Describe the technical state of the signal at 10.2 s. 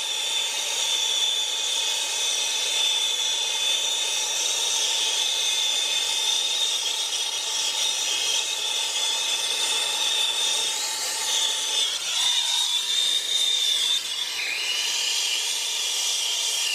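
At 10.2 s the signal is intact, with no audible technical fault at that moment.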